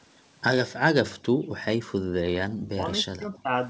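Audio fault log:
1.29–1.50 s and 2.00–2.14 s: background gated by the echo canceller. The room sound drops by about 21 dB, then about 40 dB. The canceller clamps the microphone while the loudspeaker plays.
2.51–2.83 s and 3.04–3.53 s: speech suppressed in double talk. The speech sinks almost to silence. Both sides likely talked at once, so the canceller muted its own talker.
3.34–3.39 s: echo leak. A faint, brief copy of the speech returns 261 ms late, far below the speech. It is likely loudspeaker pickup that the canceller failed to remove.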